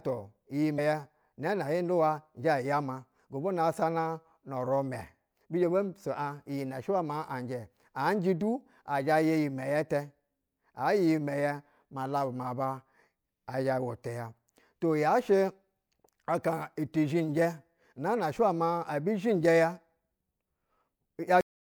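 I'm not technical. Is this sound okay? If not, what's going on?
No, there are two problems. Right near the start, from about 0.75 to 0.79 s, there's a quick glitch. That's damaged data in a compressed stream. Part of the compressed file got scrambled, so the player couldn't make sense of that tiny stretch. It spat out garbage for a moment, then hunted for the next piece it could read and carried on, which can skip a sliver of the speech.

The second one is at the very end. At 21.41 s the speech just stops dead in the middle of a sound, with no natural fade, and the rest is flat silence. That's a cut-off end. The last chunk of audio was never written out or played, so instead of the recording finishing gracefully, it gets chopped off mid-sound.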